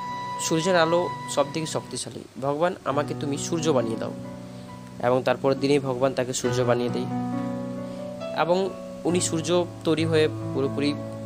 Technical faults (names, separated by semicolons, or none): none